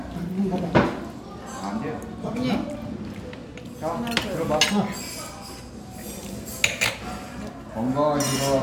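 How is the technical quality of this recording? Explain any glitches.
No audible glitches or faults.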